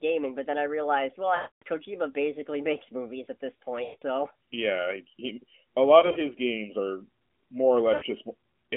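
Lost AMR speech frames break up this narrowband mobile speech clip at 1.36–1.63 s, 3.84–4.03 s, 6.00–6.20 s and 7.94–8.04 s. When a frame fails its checksum, the decoder repeats the last good pitch and vocal tract settings at falling gain. The 260 ms and 180 ms gaps stretch into a drawn-out tone that fades to silence. The 6.0 s stretch has brief gaps of at most 40 ms that cause only quick dips and warble. Speech resumes weak or rough, within the roughly 150 Hz to 3.5 kHz AMR-NB band, with light codec colouring that fits the 12.2 kbps mode.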